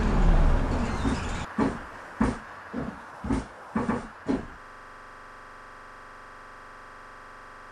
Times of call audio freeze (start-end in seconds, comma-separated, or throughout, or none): none